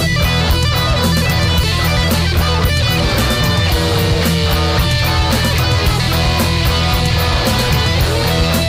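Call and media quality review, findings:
Nothing stood out on listening to the clip.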